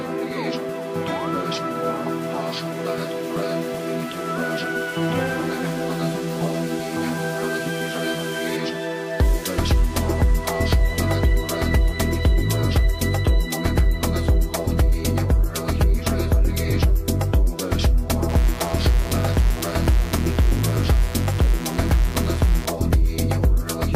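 At 18.29 s a mains buzz comes in and runs until 22.66 s. Spiky 60 Hz interference, the kind a dimmer or poor shielding lets in, sits roughly 15 dB under the signal, with harmonics reaching into the kilohertz range and giving a raspy, steady buzz.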